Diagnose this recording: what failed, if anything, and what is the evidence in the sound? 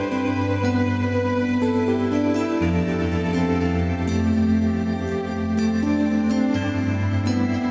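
Nothing failed; no faults heard.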